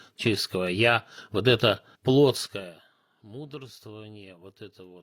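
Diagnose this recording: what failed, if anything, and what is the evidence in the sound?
Zipper noise from 2.35 to 2.76 s in the speech. The level falls about 20 dB in 2 dB steps, roughly twenty per second. Unsmoothed stepped gain clicks at each jump.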